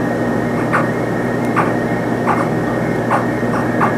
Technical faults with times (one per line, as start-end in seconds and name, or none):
none